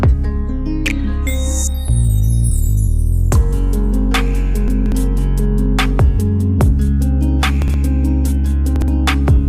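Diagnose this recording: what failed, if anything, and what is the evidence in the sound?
Chunks out of order in the buffer stage: 60 ms blocks replay late, three places back at 4.68–4.92 s, one back at 7.62–7.74 and 8.76–8.88 s, giving jumbled moments. The waveform and spectrogram show abrupt vertical seams.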